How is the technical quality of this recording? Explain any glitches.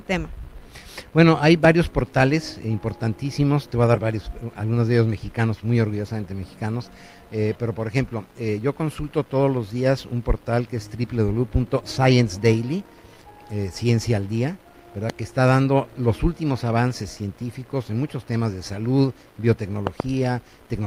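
The recording has three loud pops, at 1.65 to 1.67 s, 15.10 to 15.12 s, and 19.87 to 20.02 s, where two pops land in quick succession. Each is a sharp thump standing well above the sound, likely from a voltage pulse from a plug, switch or static. Unlike a dropout, the sound carries on uninterrupted underneath.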